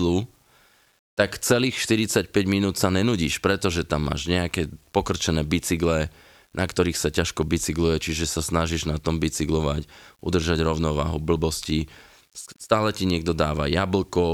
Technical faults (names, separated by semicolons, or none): low bit depth without dither